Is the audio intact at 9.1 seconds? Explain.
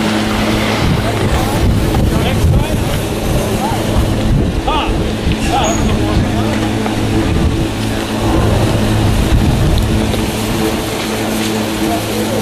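Yes, the audio is intact at 9.1 seconds, with no dropout, click, distortion or other fault audible at that moment.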